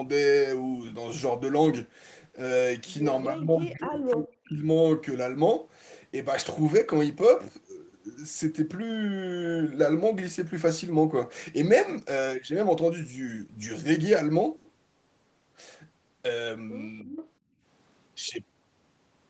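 Speech suppressed in double talk runs from 3.3 to 4.67 s. The echo canceller likely mistook overlapping talk for loudspeaker echo and pushed the voice down by up to about 40 dB, for roughly one and a half seconds in total.

Echo leak occurs at 4.11 to 4.15 s and again at 16.99 to 17.28 s. A delayed copy of the voice, 306 ms behind, likely slipped past the far end's canceller, at about 20 dB and then about 15 dB below the speech.

Background gated by the echo canceller follows at 17.39 to 17.63 s. The canceller clamps the microphone while the loudspeaker plays, so the room sound drops by up to about 20 dB for about 200 ms before returning.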